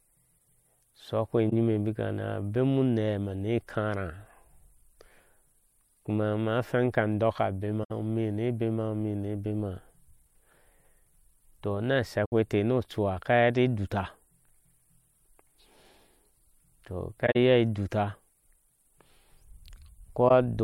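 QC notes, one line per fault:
1.49–1.53, 7.83–7.91, 12.25–12.32, 17.26–17.36 and 20.28–20.31 s, corrupt frame concealed: brief damaged spans lasting 30 to 100 ms. The decoder detected damaged AAC frames and covered each span by muting or reusing the last good spectrum.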